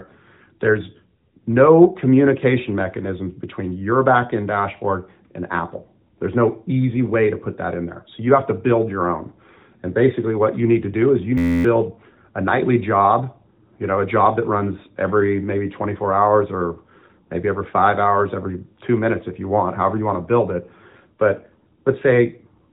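Speech, carried over a phone-style link that passes nothing above about 3.8 kHz. At 11.38 s a system hang loop takes over until 11.65 s. The machine stalled while the sound hardware kept replaying one tiny buffer. Each pass lasts 11.61 ms, which fits a 512-sample buffer. Looping it more than twenty times gives a steady buzz at 86.1 Hz. About a third of a second of real audio is lost beneath it.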